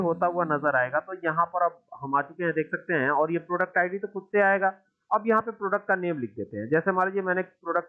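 No technical faults can be heard anywhere in the recording, with the signal staying steady and intact throughout.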